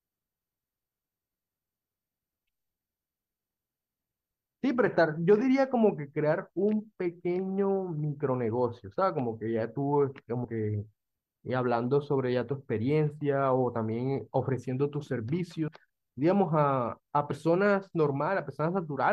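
At 10.44 s, 15.67 s and 17.31 s the speech jumps forward with compressed frames skipped. Each time, a short run of 24 ms coded frames never reaches the output, dropping about a tenth of a second of speech at the first two and somewhat less at the third.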